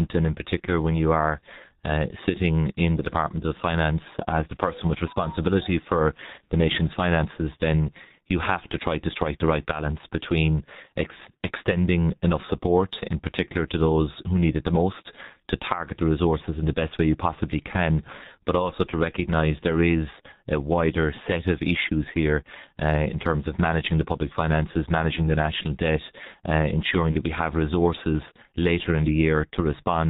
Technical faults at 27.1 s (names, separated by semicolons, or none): G.723.1 codec; VoIP packet loss concealed by the speech codec